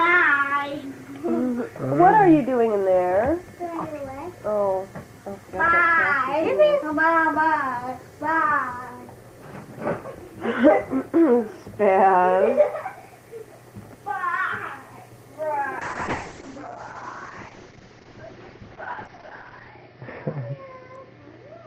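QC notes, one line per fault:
15.8–21.67 s: call bitrate drop. The bandwidth narrows from 20 kHz to 6 kHz, so the top end vanishes. The sound turns coarse and muffled. The starved encoder fits a fall from 32 to 8 kbps. It sits at its worst for 3.9 s and never recovers.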